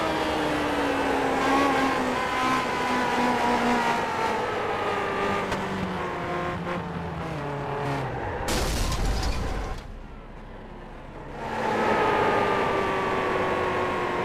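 No technical faults can be heard anywhere in this recording.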